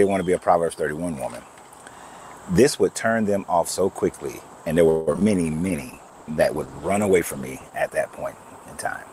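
From 4.89 to 5.23 s the audio turns choppy and robotic: repeated packet loss leaves four holes, the longest 175 ms, and concealment fills roughly two thirds of that stretch by extending the preceding sound. A jitter buffer slow-down follows from 5.37 to 5.96 s, playing at 86% speed with unchanged pitch while the receiver repeats short segments, adding 89 ms to rebuild its reserve. From 5.70 s to the end, a call bitrate drop from 96 to 13 kbps makes the sound coarse and muffled, with high frequencies cut off.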